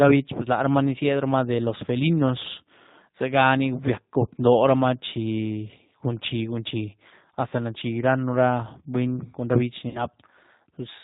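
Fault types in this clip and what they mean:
G.729 codec: an 8 kbit/s codec that models the voice with a vocal-tract filter and pitch predictor; here plainly rough, synthetic, nothing above 4 kHz.
VoIP packet loss concealed by the speech codec: missing audio is extrapolated from the last pitch and filter, giving a buzzy tone or coloured noise that fades: 20 ms at 7.49 s, 60 ms at 9.89 s.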